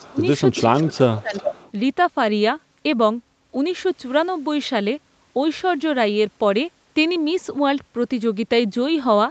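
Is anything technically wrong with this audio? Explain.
Yes. There is echo leak at 0.0, 0.55, 0.93 and 1.17 to 1.71 s: a copy of the speech, about 10 to 25 dB below it, returns about 380 ms later, likely from a loudspeaker echo the far end's canceller missed. Speech suppressed in double talk occurs at 0.1 to 0.25 s and 0.65 to 1.49 s, where the talker drops by up to about 20 dB, likely because the canceller mistook overlapping speech for echo.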